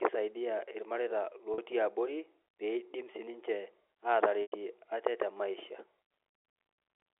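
Packet loss with pitch repetition hits at 1.54 to 1.58 s and 4.42 to 4.52 s. The receiver repeats the last pitch period to bridge each gap. The 40 ms loss sounds like a brief buzzy hold. The 100 ms loss fades to silence before speech cross-fades back.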